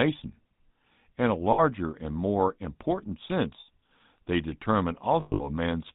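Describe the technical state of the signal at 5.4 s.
At 5.4 s the signal sits inside a burst of lost GSM frames running from 5.2 to 5.48 s. About 180 ms of audio goes missing across that stretch, with the longest gap around a tenth of a second. Each missing frame is filled by repeating the last good frame's settings, so the sound hangs as a rough, metallic ring rather than cutting cleanly.

Underneath, the GSM full-rate codec is plainly audible. It models the vocal tract and drives it with a sparse, regularly spaced pulse excitation, which gives the speech a buzzy, gravelly texture and removes everything above 4 kHz. The result is consistent with the 13 kbps full-rate GSM coder.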